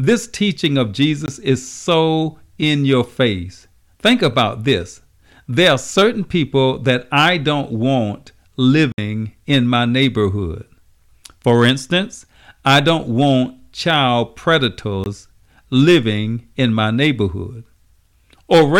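Brief holes at 1.26 to 1.28 s and 15.04 to 15.06 s, and a short hole at 8.92 to 8.98 s, are blocks of digital silence. Speech cuts abruptly to silence for 20, 60 and 20 ms and returns without a fade, pointing to output buffers left unfilled.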